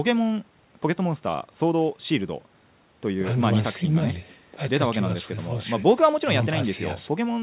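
No technical faults can be heard anywhere in this speech recording. It has come through a WebRTC call path using G.711 mu-law at 64 kbps, so nothing is present above 4 kHz, giving the familiar narrowband telephone sound.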